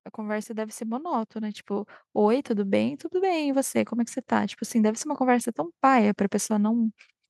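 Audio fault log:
0.16–3.8 s, automatic gain rising: the level climbs steadily by about 10 dB over more than three seconds. The gain control judged the input too quiet and kept raising its gain. Speech and background noise swell together because both pass through the same stage.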